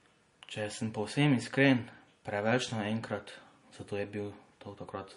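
Throughout, the speech has nothing above 10.6 kHz and keeps swirly MP3-style artefacts: likely low-bitrate audio saved at a high bitrate, unlike a clean low-pass filter.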